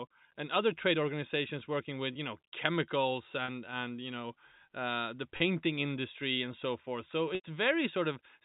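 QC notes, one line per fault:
3.45 s, 5.37 s and 7.35–7.44 s, packet loss with pitch repetition: at 3.45 s, between "with you know chemicals" and "and you know", and at 5.37 s, just before "industry and so forth", a 30 ms gap comes through as a brief held, buzzy tone. At 7.35 s the 90 ms gap buzzes, fades to silence, then cross-fades back. Each time lost packets were concealed by repeating the last pitch period, faded out over about 50 ms, under the 4 kHz telephone band of the G.711 link.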